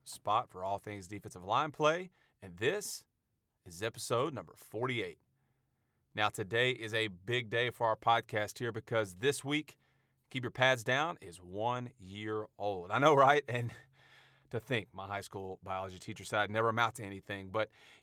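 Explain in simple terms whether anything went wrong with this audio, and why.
Nothing went wrong with the speech recording: the signal stays steady and intact, with nothing that points to a recording, processing or playback problem.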